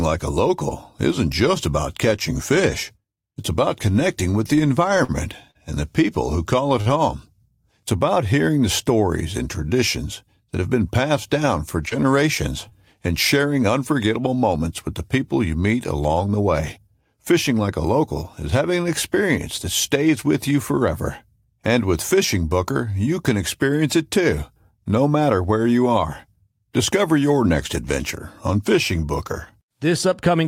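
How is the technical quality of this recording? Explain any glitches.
The recording has three kinds of network glitch, all brief.

Scattered short gaps run from 4.97 to 6.88 s, just after "about connecting with the". Roughly four packets went missing or arrived late. The receiver bridged each hole by extending the previous sound. About 150 ms was filled in total, the longest gap around 50 ms. You hear small ticks and smears.

Short concealed packet loss hits twice: 11.89 to 11.93 s, and 12.69 to 12.73 s, just before "and sharing unforgettable". About 20 ms of audio missed the decoder each time. The receiver carried the last sound forward, then blended back. Each sounds like a quick smear or wobble.

A jitter buffer speed-up occurs from 20.81 to 21.46 s, right after "that stays with you". The buffer had built up extra audio. To shrink it, the receiver cut small pitch-period pieces, roughly 50 ms in all. 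The sound plays at 106% speed at unchanged pitch, briefly hurried.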